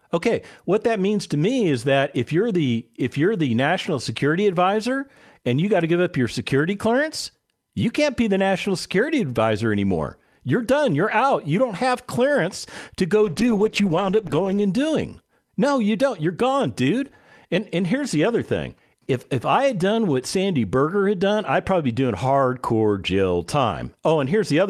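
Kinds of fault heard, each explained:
Call bitrate drop, 13.26 to 14.73 s, just after "have clearance to go": the speech turns muffled and watery as the call's bandwidth estimate collapses and the encoder is told to spend far fewer bits. The dulled top end and coarse, smeared texture fit a fall from about 48 kbps to roughly 12 kbps, where the codec trims high frequencies. The degraded sound holds for about 1.4 s before the bitrate recovers.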